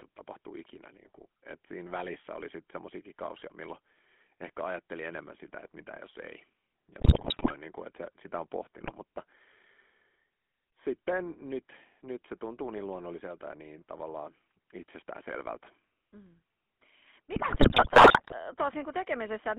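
From the first second to the end, the speech carries the signature of the GSM full-rate codec. The band is confined to roughly 200 Hz to 3.4 kHz, and the coder rebuilds the voice from a vocal-tract model excited by coarse, regularly spaced pulses, giving a plainly audible buzzy, gravelly texture consistent with the 13 kbps full-rate scheme. Sibilants and upper harmonics lose their detail and take on a grainy edge.

GSM bit errors then break up the decoded speech three times: from 7.0 to 7.52 s, from 8.80 to 8.94 s, and from 17.34 to 18.33 s. Corrupted bits in the received frames feed wrong filter, pitch and gain parameters to the decoder, so the spectrum warps and the level jumps. The voice turns into squawks, pops and gargling bursts, most dense in the first and last episodes, while the middle one is the briefest.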